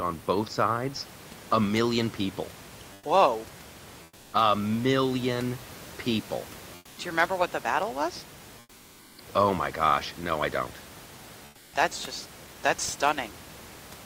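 In five pauses, after "sides a million people" at 2.95–3.03 s, at 4.03–4.31 s, after "million people" at 6.75–6.95 s, after "what the battle was" at 8.59–9.15 s, and at 11.47–11.71 s, the room noise turns flat and featureless and drops about 4 to 6 dB. This is comfort noise in place of the background, likely from discontinuous transmission: the sender stops sending during silence and the receiver synthesises noise shaped roughly like the background.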